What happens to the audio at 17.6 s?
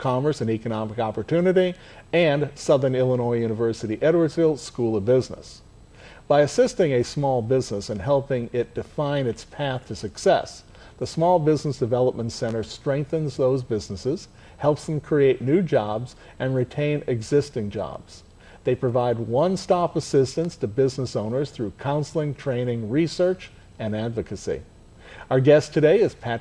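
Nothing goes wrong at 17.6 s; the audio plays through that moment intact, with no dropout, click, glitch or other fault.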